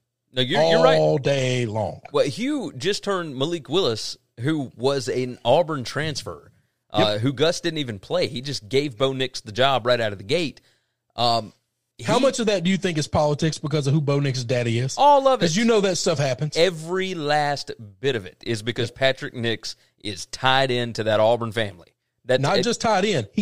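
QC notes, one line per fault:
No technical faults are audible anywhere in this speech recording; the signal stays continuous and stable at a steady level.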